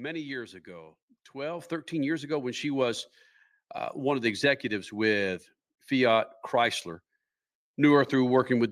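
Speech with two microphone volume stepped up events, at 1.59 s (about 7 dB) and 4.26 s (about 2 dB). Each time, the input gain jumped in one step, so voice and background noise rise together. The waveform envelope widens abruptly, and the whole spectrogram brightens at once.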